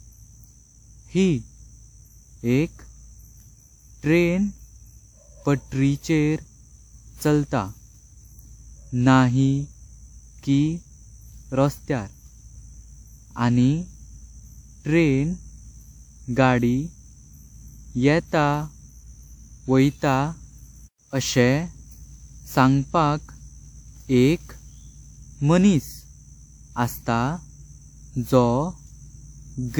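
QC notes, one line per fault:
Throughout, generation loss: swirly, hollow, smeared speech with blurred onsets, likely from about seven lossy re-encodes, consistent with WMA near 128 kbit/s, each stacking fresh quantisation damage.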